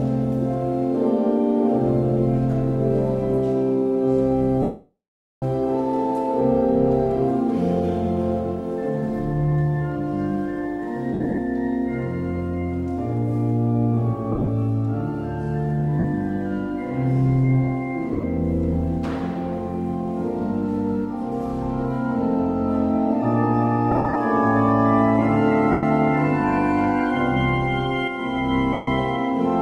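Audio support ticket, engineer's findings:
Lost LE Audio frames, eight dropouts: 4.62–5.43 s (about 0.8 s), 11.13, 14.32, 15.99, 18.12, 23.91, 25.71, 28.73 s, each 45–160 ms. Some are scattered bursts with runs up to roughly 70 ms. Radio-link loss. LC3 concealment replays the last spectrum with randomised signs, so tones smear into noise. The long gap at 4.62 s fades to silence. Gap lengths fit 7.5 ms frames. Light lossy compression alongside, at most a faint watery texture.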